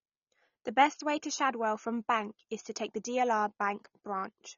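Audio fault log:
throughout, AAC compression: speech is dull, with a fizzy, warbling edge and nothing above 6.9 kHz, likely from coarse AAC-LC quantisation at around 24 kbps.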